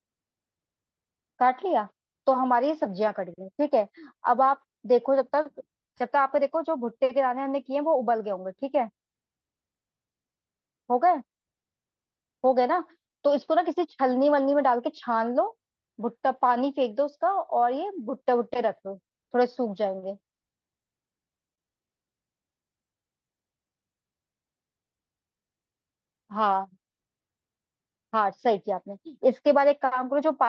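At 19.99 to 20.04 s and again at 21.55 to 21.60 s, a short stall from a late packet holds the speech for about 27 ms and then 30 ms as the jitter buffer runs dry. Nothing is lost, but the sound lingers with a slight buzz or dip. A spectrogram shows smeared, repeated frames, and the waveform shows a slightly stretched segment.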